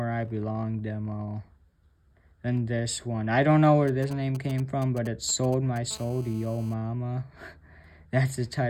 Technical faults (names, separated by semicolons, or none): GSM signalling bursts; GSM phone buzz